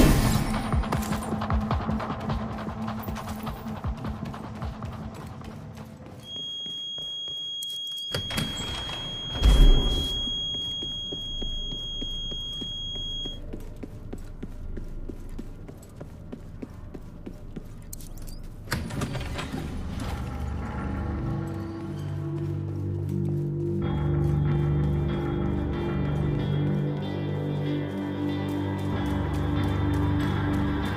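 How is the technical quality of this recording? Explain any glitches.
The recording carries one clear fault: a feedback whistle from 6.19 s to 13.42 s. Throughout that stretch a thin, steady tone at about 3.3 kHz sits just a few decibels beneath the main sound, swelling and fading slowly in level but never building into a howl. The likely cause is a loudspeaker-to-microphone loop hovering right at its feedback threshold, so a single high frequency keeps recirculating and sustaining itself without gaining enough to run away.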